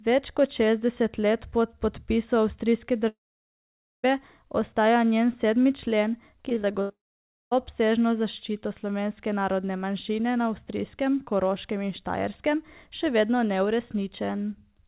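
Speech heard through a narrowband call path, with nothing above 4 kHz, which fits a G.711-type codec. From 3.08 to 4.05 s and again from 6.91 to 7.53 s, sound gives way to a brief fading continuation and then near-silence for most of the span, before resuming without the missing stretch. This is likely a long network dropout: one unbroken hole, not a string of small ones. Between 6.49 and 6.91 s, repeated packet loss produces choppy, robotic sound, with six short gaps (the longest 78 ms) patched in turn and about a third of that span concealed. The sound keeps returning between the gaps rather than falling silent.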